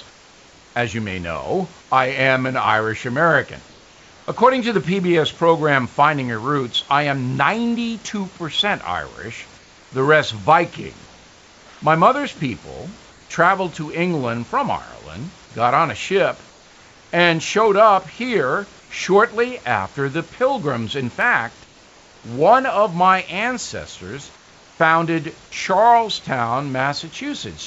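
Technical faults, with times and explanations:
0.10–1.90 s, 3.68–4.28 s, 9.58–13.30 s, 16.50–17.12 s, 18.80–18.90 s, 21.64–22.24 s, 24.36–24.80 s: comfort noise in place of the background. The room background in these gaps becomes a smooth, even hiss, about 2 to 3 dB quieter where it can be measured. The first gap ends just before "I am an", and the short one falls between "up here" and "shortly after the". This is likely discontinuous transmission: the sender goes quiet during pauses and the receiver fills them with synthetic noise. On a spectrogram, the textured background gives way to flat, uniform bands. On the waveform, the pause floor steps slightly down and becomes steady.
17.66 s, 21.21 s, 23.13 s: dropped samples. Each is a single sharp tick. The first comes just before "up here shortly after". Only a handful of samples are missing, a tiny fraction of a millisecond, so no sound is lost. 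This is likely caused by samples being skipped in the stream, which makes the waveform jump straight from one value to a later one. The spectrogram shows a thin vertical line through all frequencies, and the waveform shows an abrupt step at that point.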